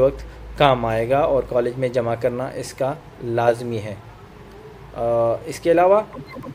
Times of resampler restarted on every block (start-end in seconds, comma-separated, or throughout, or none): none